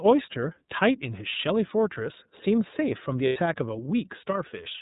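The whole speech clip runs through the iLBC codec. Nothing above 4 kHz survives, so the sound is dull and narrowband. Each frame's excitation is coded on its own, leaving a plainly audible rough, synthetic edge. The framing fits iLBC's 30 ms mode.

From 3.27 to 3.37 s, lost iLBC frames leave a gap. The decoder fills it by repeating the last pitch cycle, mixed with noise. It sounds like a held, slightly buzzy vowel. The 90 ms gap fits three lost frames. The sound recovers almost at once.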